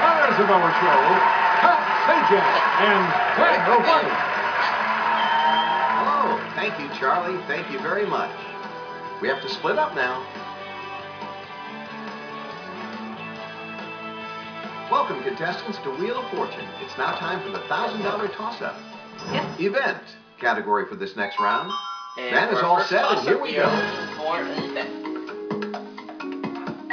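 Nothing stood out on listening to this audio.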